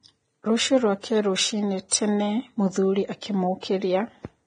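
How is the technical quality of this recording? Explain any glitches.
The recording's technical quality is poor: heavy lossy compression damages the speech from start to finish.

Vorbis compression, throughout: a likely Vorbis encode around 23 kbps removes everything above 9.7 kHz and coarsely quantises the remaining treble, leaving grainy hiss and blurred consonant attacks.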